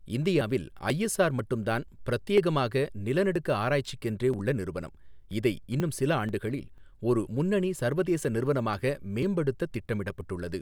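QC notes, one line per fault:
0.41 to 10.21 s, periodic USB or driver dropouts. A small piece of the speech goes missing every 0.49 s, about twenty times. Each gap is roughly 10 ms. The audio jumps straight across it with no silence inserted. That abrupt join makes a tick or small pop. The ticks come at an even rate, and only while there is signal. A background task is stalling the USB bus or the audio driver on a fixed cycle, so samples are dropped on each stall.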